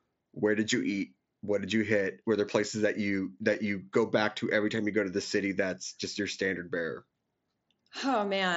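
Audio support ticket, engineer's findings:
Concealed Bluetooth headset packet loss at 3.54 s and 6.15 s: single lost 7.5 ms frames, gap filled by repeating best-matching recent waveform, nearly inaudible. Carried over the mSBC headset link.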